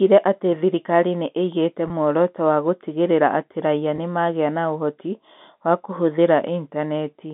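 A speech clip over a G.711 telephone line, band-limited to about 200 Hz to 3.7 kHz, with two brief dropouts from packet loss with pitch repetition. At 1.88 to 1.90 s and 3.96 to 3.98 s, about 20 ms of audio goes missing, which fits a single lost packet each time. The receiver fills each gap by repeating the last pitch period, giving a short, slightly held, buzzy sound.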